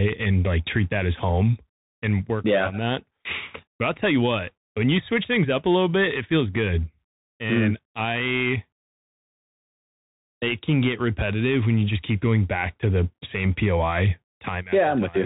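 Throughout, the speech carries Bluetooth CVSD headset codec damage: the spectrogram is blank above 4 kHz, with scratchy sibilants, granular hiss and slope-overload distortion.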